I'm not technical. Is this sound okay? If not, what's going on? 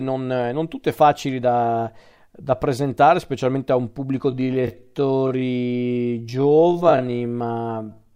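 No. From about 4.27 s, right after "specialmente a un pubblico", to the end, there is a time-stretched section: the speech suddenly slows to roughly half its pace (0.545 times normal speed) while the pitch stays the same. It sounds dragged out. The likely cause is software stretching that part to fill a set length, repeating short slices of the sound instead of lowering the pitch.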